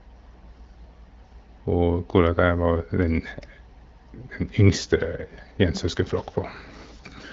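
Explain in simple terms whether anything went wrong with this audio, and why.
Nothing went wrong here: the speech has simply passed through the AMR wideband (HD Voice) phone-call codec, which packs it into a compact form and leaves only a light trace of that processing while the speech stays clear.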